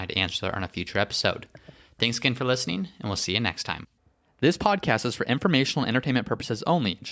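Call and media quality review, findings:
Nothing stood out on listening to the speech in this recording.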